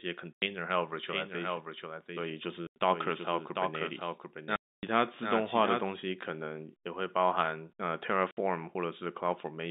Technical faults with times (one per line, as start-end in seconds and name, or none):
0.33-0.42 packet loss filled with silence
1.08-5.90 doubled audio track
2.67-2.76 packet loss filled with silence
4.56-4.83 packet loss filled with silence
8.31-8.37 packet loss filled with silence